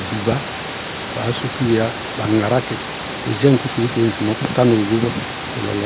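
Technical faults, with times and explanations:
No technical faults can be heard in this recording. The speech comes over a call link with nothing above 4 kHz, as expected for a G.711 A-law path at 64 kbps, with the room's background noise sitting about 11 dB below it.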